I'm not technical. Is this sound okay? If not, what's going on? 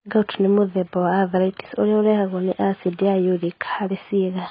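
No. AAC compression damage runs through the whole recording. The speech sounds muffled, with nothing above about 5 kHz, so crisp consonants like s and t lose their edge. Vowels and hissy sounds have a watery, fizzy texture. This is likely from saving the audio in a heavily squeezed AAC format, which throws away the high end entirely and re-draws the remaining detail coarsely to keep the file small.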